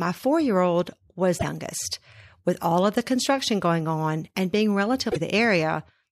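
Right after "my four year old", at 1.37 to 1.44 s, there's a short blip, and a second one follows "going on and being" at 5.08 to 5.16 s. Both are damaged data in a compressed stream. A bit of the encoded file got corrupted, so the decoder chokes on those frames, loses sync and has to hunt for the next valid header. For roughly 70 to 80 ms the speech is disrupted.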